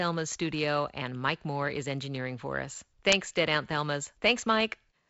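The speech shows no technical faults, and it carries the sound of G.722 wideband telephone coding at 48 kbit/s, with the spectrum ending around 7.7 kHz and only a light grain from the coding.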